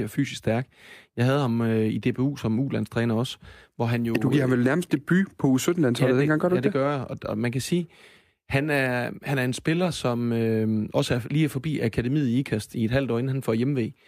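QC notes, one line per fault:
No technical faults are audible anywhere in the recording, and the signal holds steady throughout.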